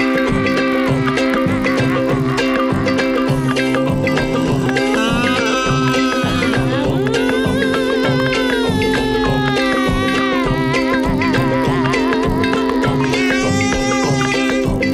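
The resampler restarted on every block, converting each 20 ms chunk from 24 kHz to 48 kHz in isolation. At every chunk edge the converter lacked the real neighbouring samples, leaving a small error at each boundary. Across the whole audio these errors repeat fifty times a second, producing a steady 50 Hz buzz riding on the sound wherever there is signal.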